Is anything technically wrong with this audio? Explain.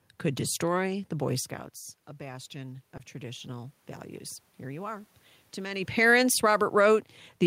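Yes, two things. From 2.16 to 3.8 s there's automatic gain rising. The level coming into the microphone dropped by about 14 dB, with the talker audibly moving around 1.5 s, and the gain control responded by slowly pushing its gain up, by about 3 dB over that stretch. It's a gradual lift, not a jump, so the voice and the room noise behind it swell up together, which is the giveaway that it's the processing and not the person.

Right in the middle of that, from 2.97 to 3.01 s, there's a short concealed packet loss. About 20 ms of audio never made it to the decoder in time, and the receiver papered over the gap by extending whatever sound came just before, then cross-fading back into the real signal. On this clip it comes across as a tiny smear or wobble, and a quick consonant sitting there could drop out.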